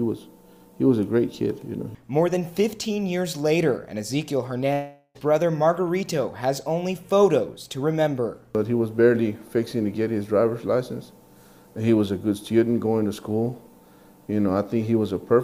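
At 4.73 s the audio stops being new and turns into a buzzy continuation of the last sound, fading over about 415 ms, followed by roughly 20 ms of near silence before it resumes at 5.17 s. Around 420 ms of material is gone, so the return picks up further on with no overlap. This is a long network dropout, likely a stall in packet arrival that left the receiver's concealment extending old audio until it gave up.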